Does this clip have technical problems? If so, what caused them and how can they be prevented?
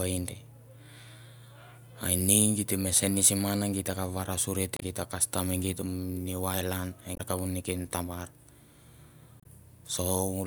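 Yes. Damaged data in a compressed stream causes brief blips at 4.77 to 4.83 s, at 7.14 to 7.21 s between "e giet new ireland" and "kavu neken tabar", and at 9.40 to 9.46 s. Corrupted frames make the decoder lose sync and skip ahead. Prevent it with checksummed, error-protected storage and transport.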